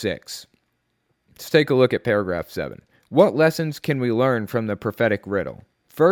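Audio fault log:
No faults detected in this speech recording.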